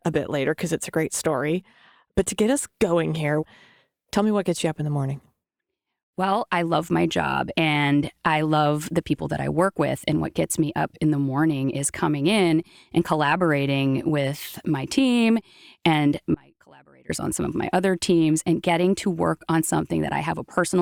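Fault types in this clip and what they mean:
Audio dropout to a faint residue: the speech is lost abruptly at 16.34 s and returns just as suddenly at 17.10 s, a gap of about 0.75 s. The break is not silent; a faint residue remains, roughly 30 dB below the normal signal level, so the path stayed live while the wanted feed fell away. The hard edges set it apart from a natural pause or fade, and the likely cause is a momentary loss of the main signal upstream.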